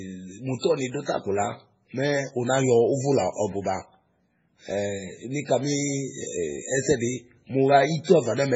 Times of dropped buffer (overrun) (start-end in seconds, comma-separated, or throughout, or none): none